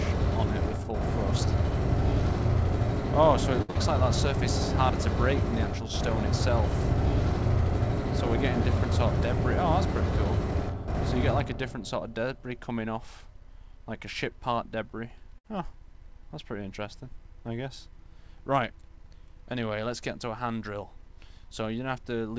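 A short stall from a late packet comes first, at 3.62 to 3.71 s: a packet arrived after its playout time, the jitter buffer emptied, and the receiver held the last sound for 67 ms before carrying on from the same point, so nothing is lost but the audio hangs with a slight buzz and playback ends up 67 ms later. Short concealed packet loss follows immediately, at 3.71 to 3.77 s: 60 ms of audio never reached the decoder, and 42 ms of continued sound covers the hole as a brief smear, with playback pulled back by a small amount. A burst of packet loss at 15.38 to 15.46 s loses another 60 ms; the receiver extends and fades the preceding sound over 59 ms into a held buzz or fading hiss, then resumes further along, so the material in between is gone. Beneath all of this runs the call codec path, with nothing above 8 kHz, which fits G.722 at 64 kbps.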